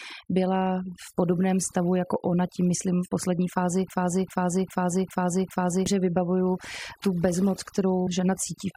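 Speech, and the overdone noise removal is there the whole way through: the noise reducer was pushed too hard, so bands near its noise estimate get switched off along with the quiet bits of the voice, leaving near-silent gaps full of twinkly specks. Then from 3.90 to 5.86 s, right after "myslím v poslední fázi", there's a broken-record loop: a 0.4 s fragment plays five times back to back before "vybavuju tu bezmoc", likely a stalled player or stream resending its last chunk, so whatever came in between is gone.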